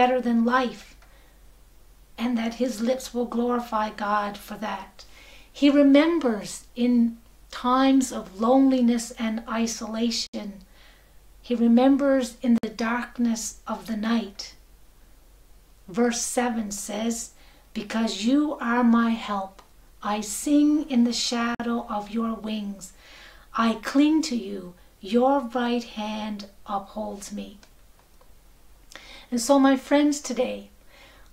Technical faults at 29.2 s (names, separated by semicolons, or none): none